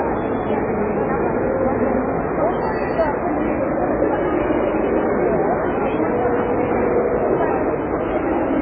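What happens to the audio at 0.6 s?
At 0.6 s the sound carries MP3 compression damage that runs through the whole clip. Nothing is left above 4.6 kHz, and the remaining detail swirls and warbles as weak frequency lines switch on and off between frames, which fits a very low bitrate near 16 kbps. That warbling is what sets it apart from a simple low-pass filter, and it is likely the result of heavy MP3 encoding.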